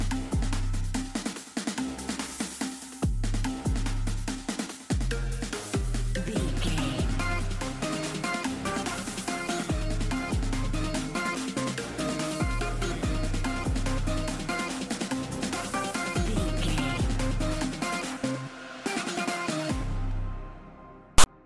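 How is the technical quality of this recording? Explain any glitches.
One glitch stands out, right at the end. From 21.18 to 21.26 s a harsh, loud rasp cuts in with hard edges and then drops to dead silence. This is file tags played as audio: a block of text tags, followed by zero padding, was decoded as though it were samples. The text bytes produce the lopsided, offset rasp and the padding gives the silence.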